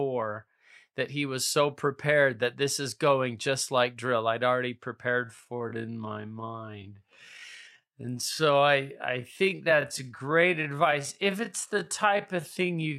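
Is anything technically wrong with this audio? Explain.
Yes. A time-stretched section starts at 5.17 s, right after "like drill I'd already", and runs to the end of the clip. From there the speech plays at about 0.63 times its original pace, while the pitch stays the same. The likely cause is software lengthening the audio by repeating short slices to fill a longer duration. The pacing drags abruptly from that point onward.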